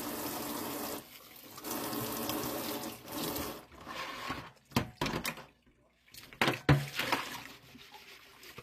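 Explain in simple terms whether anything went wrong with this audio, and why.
Yes, two things went wrong. Throughout the clip the treble sounds gritty and plainly metallic, with nothing at all above about 14.9 kHz. The likely cause is HE-AAC compression, which stores only the lower frequencies and rebuilds the highs by copying lower bands upward, so they never quite match the original.

At 4.91 s there is a tiny tick. A block of digital silence about 2.6 ms long cut the sound abruptly to silence and back with no fade.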